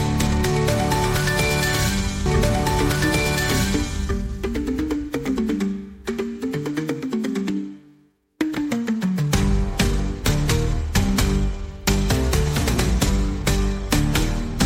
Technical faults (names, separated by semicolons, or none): doubled audio track